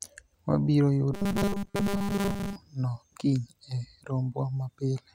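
From 1.14 s to 2.56 s the speech takes on a robotic sound from repeated short buffers: a rigid, metallic 200 Hz buzz that still roughly tracks the syllables. The likely cause is audio arriving too seldom, so playback loops the last fragment, about 5 ms, while the real audio is skipped, here for roughly seventy percent of that stretch. A spectrogram shows flat, evenly spaced harmonics at multiples of 200 Hz, and the waveform shows identical 5 ms cycles repeating.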